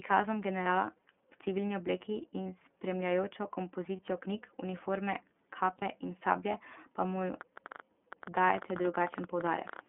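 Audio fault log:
throughout: iLBC codec. The whole clip is squeezed into a telephone band of roughly 250 Hz to 3.4 kHz, so there's no air or sparkle up top and the low end is thin. The codec damage is plainly audible: the speech has a slightly rough, synthetic grain because each frame's excitation is coded on its own at a low rate, which fits iLBC's 13.33 kbps mode with 30 ms frames.
0.63–0.67 s, 2.43–2.46 s, 3.96–4.00 s, 5.78–5.83 s (just before "in sablje pa") and 8.82–8.85 s: lost iLBC frames. Each is a single dropout of about one 30 ms frame. Instead of silence you get a brief held, faintly buzzy vowel, because the decoder fills the hole by repeating the last pitch cycle mixed with a little noise. Since iLBC frames don't depend on each other, the speech snaps back straight afterwards without any smearing.
7.41–9.80 s: train of clicks. There are about forty sharp, similar ticks, averaging around 14.7 per second but spaced irregularly, and the loudest reach around 5 dB above the speech. 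They sit on top of the signal, including the gaps, so they come from outside the audio itself. The likely cause is interference from nearby equipment or a faulty connection or power supply, injecting the same pulse over and over.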